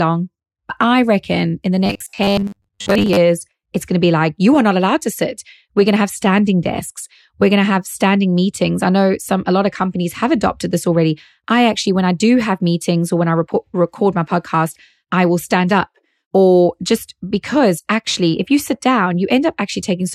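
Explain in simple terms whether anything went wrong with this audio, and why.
From 1.86 to 3.17 s the speech turns into a stiff, metallic buzz: robotic sound from repeated short buffers. It's likely caused by new audio arriving too slowly, so the playback filled the gaps by looping the last sliver of sound, which fits a 10 ms buffer. Roughly half of that stretch is repeats rather than real speech. The looping forces a fixed 100 Hz drone, so the speech keeps only its rough shape.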